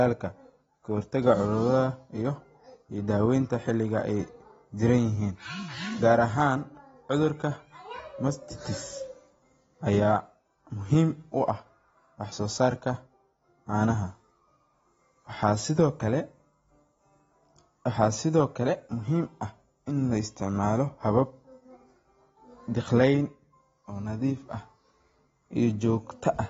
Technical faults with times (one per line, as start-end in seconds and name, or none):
0.00-26.50 AAC compression